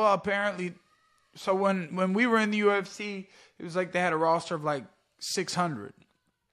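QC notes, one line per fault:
No fault found in this clip.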